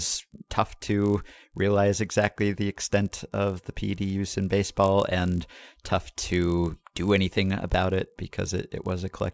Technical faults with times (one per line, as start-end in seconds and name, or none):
0.00-9.34 resampler restarted on every block